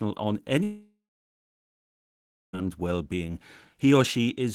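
At 0.63 s the speech suddenly gives way to a smeared continuation of its last sound. This is heard as a buzz or hiss that fades out. Silence follows for about 1.5 s. Speech returns at 2.55 s, after a gap of about 1.9 s. It picks up further on, with that stretch simply gone. The likely cause is a long network dropout. No audio reached the receiver, so it first extended the last sound and then fell silent.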